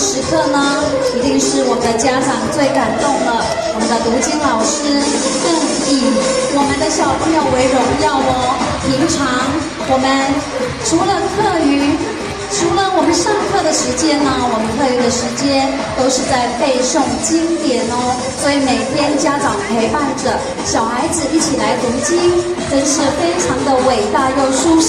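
Nothing stood out as a technical problem on listening to the audio.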